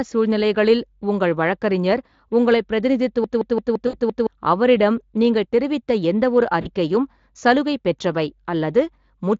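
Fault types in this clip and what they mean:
System hang loop: The machine or its driver stalled while the sound hardware kept replaying its ring buffer. From 3.24 to 4.27 s, one 170.67 ms slice repeats exactly six times, which fits an 8192-sample buffer. At about 5.86 repeats per second it sounds like a machine-gun stutter, not a buzz. Roughly a second of real audio never arrives, so the speech jumps ahead when the loop ends.
VoIP packet loss concealed by the speech codec: Packets went missing, and the decoder filled the gaps by extending its last pitch and filter settings while lowering the level frame by frame. The sound smears into a fading buzzy tone or coloured noise instead of going silent. This happens for 60 ms at 3.87 to 4.00 s, inside the hang loop, and for 40 ms at 6.61 to 6.67 s. Each gap fits a few 20 ms frames. The speech stays weak briefly afterward.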